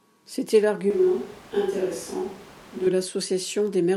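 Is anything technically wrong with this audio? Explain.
Yes. From 0.90 to 2.87 s the speech abruptly turns hollow, roomy and thin, with background noise about 20 dB below it at a barely changed level. This is likely a switch to a distant microphone. Unlike added reverb, the bass loss and noise rise together, then end as suddenly.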